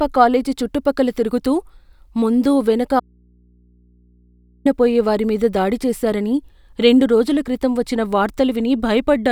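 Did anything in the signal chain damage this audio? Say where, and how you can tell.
Yes. The analogue wiring likely lost its connection briefly, leaving the input open: an audio dropout to a faint residue from 3.00 to 4.65 s. After "ముందు వెనక" the speech cuts abruptly to mains hum about 35 dB down, returning at "వారి మీద దాడి చేసారని".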